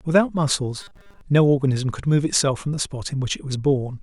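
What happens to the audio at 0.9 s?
Robotic sound from repeated short buffers, 0.81 to 1.21 s: a 200 Hz metallic buzz, likely from 5 ms chunks replayed in place of most of the missing audio.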